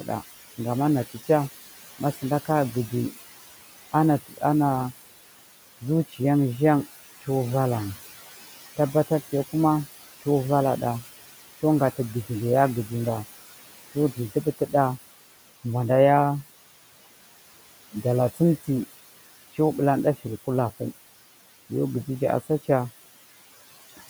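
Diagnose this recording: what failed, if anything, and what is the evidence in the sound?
The failure is in call processing, specifically the noise suppressor. Throughout the clip you can hear noise suppressor artifacts: the room noise, which sits about 16 dB under the speech, gets pulled down by about 15 dB in the gaps and then comes back up underneath each phrase, so the background keeps pumping. That's the suppressor estimating the steady noise and attenuating those bands frame by frame, switching harder whenever it decides nobody's talking.

The same suppressor is also cutting speech, which shows up as two dips where the talker suddenly goes faint. The first runs from 4.29 to 4.42 s and drops about 13 dB. The second, from 14.34 to 14.74 s, is deeper at about 17 dB, and only part of that window is affected, roughly 150 ms in total. In both places it misread quieter speech as noise and ducked it along with the background, so those bits sound swallowed.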